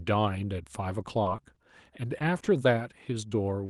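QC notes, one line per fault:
1.23–1.58 s, repeated packet loss (robotic sound): four quick holes, about 70 ms patched in total, give a choppy stretch, unlike the isolated single smears later.
2.18–2.22 s, 2.38–2.42 s and 3.66–3.69 s, short concealed packet loss: each 20 ms hole is filled by extending the last sound, giving a brief smear where material is lost rather than held.
2.44–2.48 s, short stall from a late packet: a late packet emptied the jitter buffer, so the sound is stretched about 20 ms with a slight buzz or dip, and nothing is missing afterwards.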